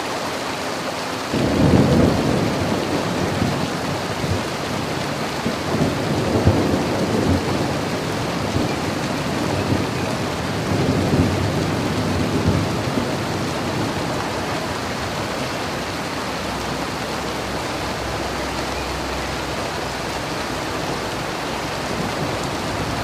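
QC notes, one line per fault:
0.39–22.57 s: clock drift buffer slips. A click every 0.6 s, about forty in all. Likely unsynchronised clocks roughly 500 ppm apart, dropping or repeating small sample blocks.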